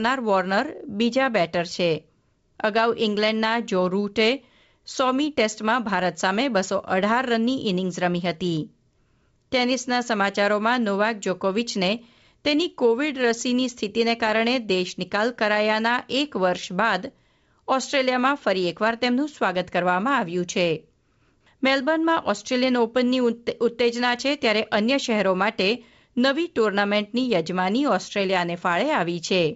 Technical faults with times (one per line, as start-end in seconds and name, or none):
none